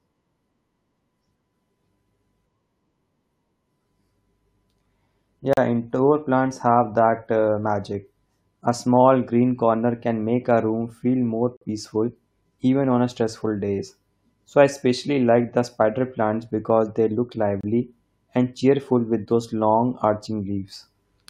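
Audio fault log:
5.53–5.57 s, 11.57–11.62 s, 17.61–17.63 s, gap between stream segments: hard-edged silent holes of about 39, 47 and 26 ms, just before "indoor plants have that" and right after "a room feel more" and "plants because they look". They recur every 6 s because timestamps at each segment boundary leave a small gap that the player fills with silence, with no audio lost.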